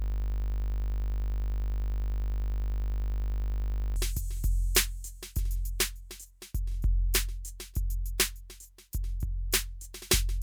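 The computer or its audio driver froze while the sound hardware kept replaying the same stretch of its ring buffer, a system hang loop already under way when the music clip begins and lasting until 3.96 s. One 20 ms slice of music repeats exactly, nearly 200 times, so in place of music there is a steady 50 Hz buzz at the loop rate, which fits a short buffer cycling without fresh data.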